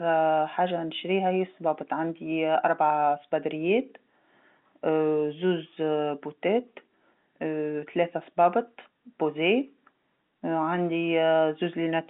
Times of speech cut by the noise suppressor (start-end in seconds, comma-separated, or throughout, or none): none